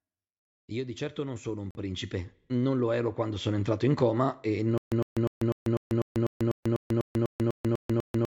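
From 0.69 to 3.91 s, automatic gain rising lifts the level by about 12 dB. Voice and background swell together slowly, ending just before "coma e".

At 1.71 to 1.75 s, the sound drops to silence for 43 ms, then resumes. A Bluetooth stall is the likely cause, with the headphone buffer running dry.

From 4.78 s, just after "coma e", stutter with silent gaps lasts to the end. A 107 ms fragment repeats 14 times, each followed by 141 ms of digital silence. The player likely stalled and replayed its last fragment each time. The audio that should have followed is lost.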